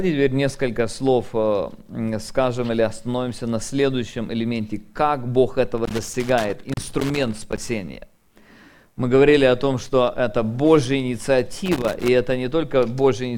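Loose connector crackle breaks up the audio from 5.78 to 7.58 s and again from 11.66 to 12.08 s: a worn contact repeatedly cuts the signal, so the waveform shows ragged dropouts and spikes, and the spectrogram shows irregular broadband vertical streaks.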